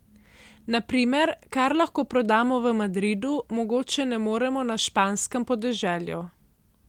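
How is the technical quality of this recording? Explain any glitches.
No audible glitches or faults.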